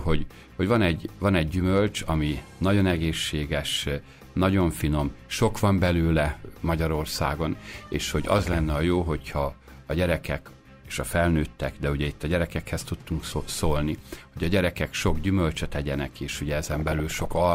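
Weak DAB reception let bit errors slip past the error correction and into the MP2 audio data, producing DAB burbling in this audio twice: from 7.72 to 8.59 s, at an error rate of around half a percent, and from 16.63 to 17.32 s, at around one percent. Corrupted sample values turn into brief blips of noise confined to individual sub-bands.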